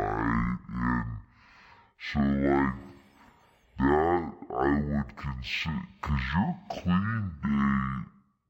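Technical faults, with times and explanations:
Throughout, stereo read as mono: the left and right samples were taken one after another as a single channel, so each moment of speech is stretched across twice the samples. It plays at 0.5x speed and 12 semitones low, with a fainter mirrored copy in the upper spectrum.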